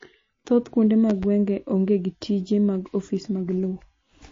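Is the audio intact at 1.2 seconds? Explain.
No. Between 1.10 and 1.26 s there is a loud pop: two sharp pops in quick succession, standing roughly 5 dB above the speech, which carries on beneath them. The likely cause is a sudden voltage step or pulse, from a plug, switch, static discharge or driver glitch, entering the signal and being shaped by the circuits that follow. On a waveform each pop shows as an abrupt spike; on a spectrogram, as thin vertical broadband streaks.

MP3 compression is also present at that moment, as it is throughout. The speech sounds plainly watery and swirly, with smeared attacks and nothing above 7.2 kHz. This likely comes from an encoder short of bits, which fits a low bitrate around 32 kbps, zeroing weak frequency lines and cutting the treble. A spectrogram shows a flat ceiling at 7.2 kHz and patchy, flickering holes below it as lines switch on and off.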